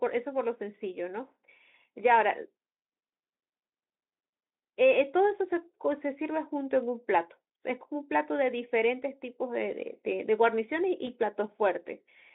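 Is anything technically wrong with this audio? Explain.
Yes. There is one fault: VoIP packet loss concealed by the speech codec. From 11.05 to 11.10 s the speech briefly smears and fades. This fits a single lost 20 ms frame. The Speex decoder filled the gap by extending its last pitch and filter at falling gain. The damage lasts longer than the gap, since each new frame builds on the faded one.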